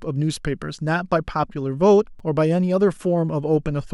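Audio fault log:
2.19 s block of digital silence: the speech cuts to silence for 5.8 ms and snaps back with no fade, so both hard edges fuse into one tick. The length fits an unfilled 256-sample buffer. Unlike a lone click, a dead hole sits between the edges.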